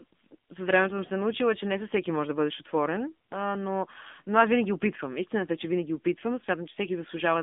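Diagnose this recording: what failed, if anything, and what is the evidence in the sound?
The failure is at the codec stage: the whole clip has passed through the AMR narrowband mobile codec. The speech is confined to a telephone band of roughly 250 Hz to 3.6 kHz, with nothing at all above 3.7 kHz, and the codec damage is plainly audible as a buzzy, synthetic texture. That degree of roughness fits a low AMR-NB mode of about 7.4 kbps. The encoder keeps only a vocal-tract model excited by sparse pulses, so fine detail is discarded. On a spectrogram, energy stops dead near 3.7 kHz.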